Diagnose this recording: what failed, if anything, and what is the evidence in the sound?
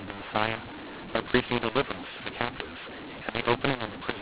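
mu-law and A-law mixed up throughout, a codec fault: mu-law samples decoded as A-law scramble the levels, making speech harsh and filling pauses with noise.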